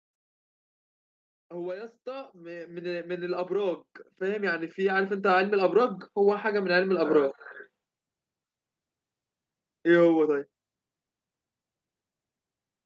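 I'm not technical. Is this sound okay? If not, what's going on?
No, there's one problem. From about 1.48 to 5.54 seconds the speech and the background noise both get steadily louder together. That's the automatic gain rising: the call software decided the microphone was too quiet and slowly turned it up over those four seconds. Because it raises everything at once, you hear the room swell along with the speaker. The slightly muffled, phone-like top end comes from the call connection itself, which is normal.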